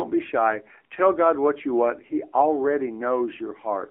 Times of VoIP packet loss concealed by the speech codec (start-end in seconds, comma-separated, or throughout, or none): none